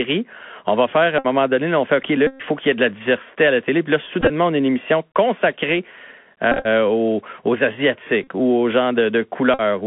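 The whole clip runs through the Bluetooth CVSD headset codec, the narrowband one-bit delta scheme sampling at 64 kHz. The band sits at roughly 200 Hz to 3.4 kHz, so the top end is simply gone. Where the speech gets loud and bright the adaptive step can't keep up, so sibilants come out scratchy and a grainy hiss sits under everything. The damage is plainly audible.

On top of that there are six spots where the headset packet is repeated. Lost packets get replaced by replaying the previous packet's bits, and a run of them turns into a buzz near 267 Hz. At 1.19 s, right after "va faire à", about 60 ms buzzes before "donné on fait". The longest hit comes at 2.27 s, about 130 ms just ahead of "faut qu'il y ait". At 4.21 s, before "on a une émission", about 50 ms of loss is scattered over roughly 80 ms, with runs of around 20 ms. At 6.52 s, about 85 ms is scattered across some 130 ms in a similar way. 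Shorter buzzes follow at 8.24 s (about 40 ms) and 9.54 s (about 50 ms).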